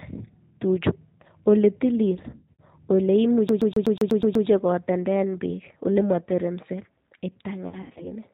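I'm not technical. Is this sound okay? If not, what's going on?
No. The whole recording has passed through the G.729 codec, a phone-call compression scheme that rebuilds the voice from a simplified model. Everything above 4 kHz is missing, so speech sounds narrow, slightly rough and a bit synthetic, and the damage is plainly audible.

From 2.31 to 2.62 s and again from 7.68 to 8.09 s there is VoIP packet loss concealed by the speech codec. Pieces of the call went missing, and the decoder filled the gaps by stretching the last sound into a buzzy tone or a coloured noise that fades. The voice stays weak or distorted briefly afterwards.

From 3.49 to 4.47 s the sound behaves like a CD stuck on one turn. The same 0.12 s fragment plays 8 times in a row, with a tiny cut at each jump back. The result is a fast, even stutter, like a scratched disc skipping.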